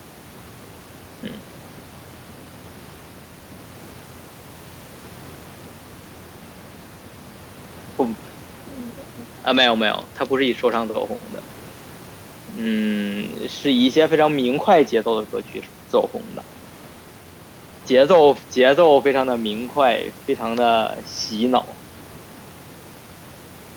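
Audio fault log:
No faults heard anywhere in the speech recording.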